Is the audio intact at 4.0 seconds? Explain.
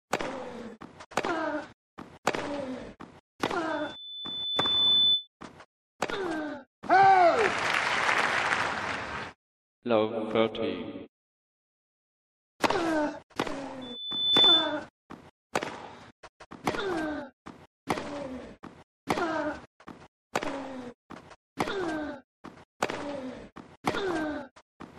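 No. From 3.69 to 5.28 s a 3.5 kHz tone swells over roughly a second to about 10 dB above the sound: loudspeaker feedback squeal, where the microphone re-amplifies its own loudspeaker.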